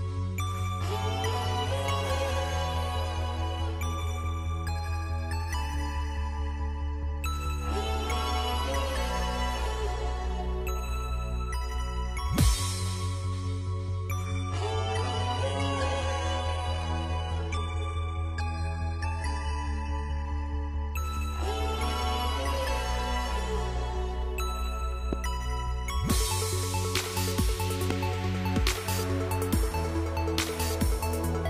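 From 14.25 to 20.25 s, the player falls back to an adaptive stream at a lower bitrate, likely because the connection slowed. For those six seconds, nothing above 11.3 kHz survives, and the top end turns thin and synthetic, with codec artefacts rising. That character points to a switch to a low-bitrate HE-AAC version of roughly 12 kbit/s. The quality drops and recovers abruptly with no gap in the audio.

Two loud pops follow, at 25.13 to 25.15 s and 27.90 to 27.93 s. Each is a single short voltage pulse added to the signal, most likely from a plug, a switch, static or a driver glitch. Each one is heard as a sharp pop sitting well above the level of the sound, with the second noticeably stronger than the first. The audio carries on underneath both.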